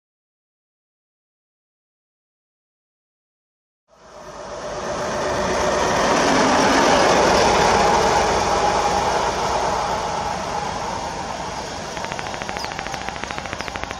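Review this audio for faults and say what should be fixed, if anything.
A train of clicks runs from 11.97 s to 13.92 s: a steady ticking at about 13.4 clicks per second, roughly thirty in all, each with much the same sharp shape and standing out around 15 dB above the sound beneath. The even spacing and repeated shape set it apart from crackle, whose pops are random in timing and size, and from a single dropout click. The likely cause is interference from nearby equipment or a faulty connection or power supply injecting pulses. To prevent it, keep cables and the interface clear of noisy equipment, use proper grounding, and make sure the interface isn't overloaded.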